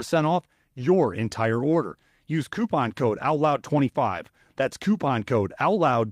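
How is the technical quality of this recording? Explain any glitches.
Two short glitches show up in the speech. At 0.81 s, just before "entire order", and at 3.77 s, you get a lost packet rebuilt from error correction. The decoder filled each 20 ms hole from a low-bitrate backup copy in the next packet, so there's no gap, just a brief rough, noisy patch.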